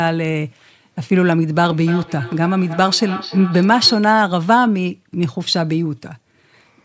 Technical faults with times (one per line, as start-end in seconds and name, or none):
1.62-4.06 feedback echo between two devices